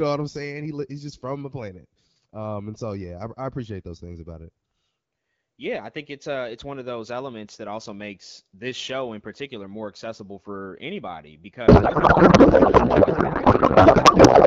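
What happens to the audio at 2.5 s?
Nothing goes wrong at 2.5 s; the speech there carries on intact, with only the light coding texture of the AMR wideband (HD Voice) codec running at 12.65 kbit/s.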